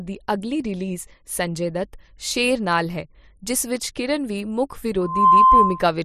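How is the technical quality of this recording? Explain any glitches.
The recording has one clear glitch, a loudspeaker feedback squeal near the end. From 5.00 to 5.89 s, just after "ਵਿੱਚ ਕੀਰਨ ਵੀ ਮੁੱਖ", a steady 1 kHz tone swells over roughly a third of a second to about 10 dB above the speech. The microphone was picking up the loudspeaker it fed, and at 1 kHz the loop gain exceeded one, so that tone kept amplifying itself.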